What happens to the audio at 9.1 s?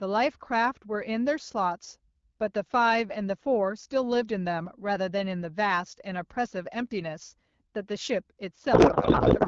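A codec payload misread starts at 8.73 s and runs to the end of the clip at 9.48 s. The decoder treats octet-aligned AMR packets as bandwidth-efficient, so every field lands in the wrong place, and the speech turns into garbled noise and warble that barely tracks it.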